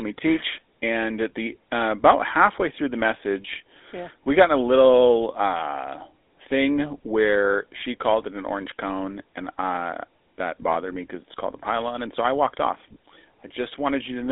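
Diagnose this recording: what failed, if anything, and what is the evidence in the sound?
Buzzy, gravelly speech throughout, boxed into a telephone band with nothing above 3.8 kHz: codec stage, a GSM full-rate codec whose coarse pulse excitation fits 13 kbps.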